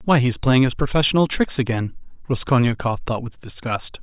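Nothing in the speech stood out as a technical problem on listening.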